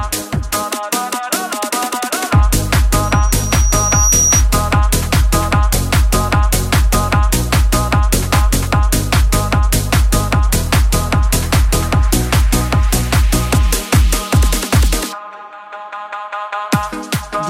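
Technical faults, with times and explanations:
3.03–4.45 s: loudspeaker feedback squeal. A single pure tone near 5.8 kHz rises out of the sound, swelling over roughly a second until it sits about 5 dB above the programme, then stops. The microphone is hearing its own loudspeaker, and at that one frequency the loop returns more than it sends, so the tone feeds itself. The steady growth from nothing at a fixed pitch is what separates it from a recorded whistle or an electrical hum.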